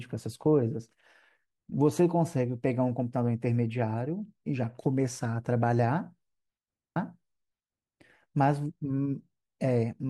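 A repeated stream segment at 6.96 to 7.98 s in this speech clip makes about a second of the programme play again. The player queued the same segment twice, adding 1.02 s, with a small blip where playback jumps back.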